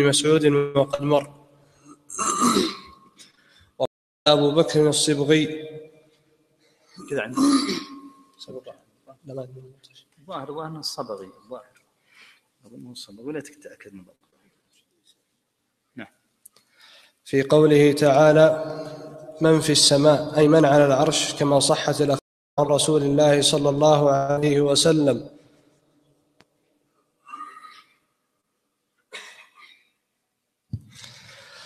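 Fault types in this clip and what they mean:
Stream reconnect: the connection dropped, the player went quiet, then reconnected and spun up a fresh decoder partway through the stream, so playback picks up later than where it stopped. It happens twice: a gap of about 390 ms at 3.85 to 4.27 s, after which the audio jumps ahead by roughly a third of a second, and a gap of about 370 ms at 22.19 to 22.59 s, where it skips ahead around 0.4 s.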